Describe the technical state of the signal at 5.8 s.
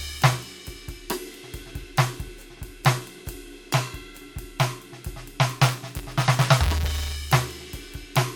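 At 5.8 s the music is in a stretch of buffer tearing from 5.57 to 7.15 s. Writer and reader are crossing inside each period, which fits a 256-sample buffer, so a small slice holds audio about 20 ms stale, producing a 172 Hz rattling buzz. A waveform shows regular hard joins; a spectrogram shows evenly spaced vertical lines.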